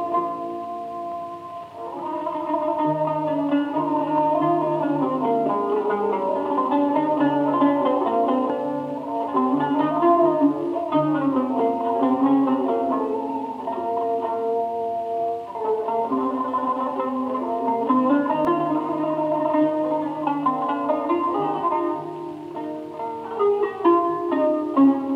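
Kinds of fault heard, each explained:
Audio missing between chunks: at 8.50 s and 18.45 s the sound jumps forward, losing roughly 50 ms each time, with both sides joined with no silence between. The 10-second spacing points to a likely cause: audio dropped while one chunk closes and the next opens.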